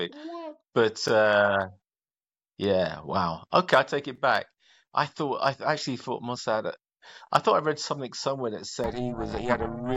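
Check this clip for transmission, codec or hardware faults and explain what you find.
One fault is audible, near the end of the clip. Overlap-add ripple runs from 8.84 s to the end, starting after "something somewhere that". The speech was split into windowed frames and rejoined with overlaps whose gains don't sum evenly, so the level swings by about 60 dB around 400 times a second, giving a metallic buzz with extra tones around the voice.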